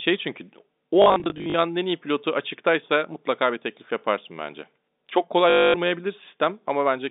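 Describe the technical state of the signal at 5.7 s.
At 5.7 s the signal is inside a packet loss with last packet repeated, spanning 5.5 to 5.74 s. For those 240 ms the receiver replays the last good packet, so the run buzzes as a short robotic stutter.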